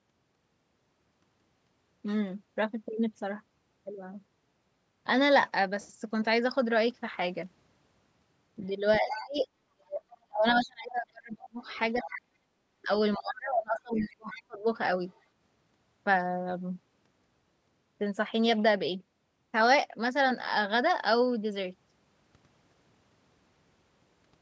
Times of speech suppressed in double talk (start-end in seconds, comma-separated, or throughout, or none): 9.00-12.41, 12.84-14.66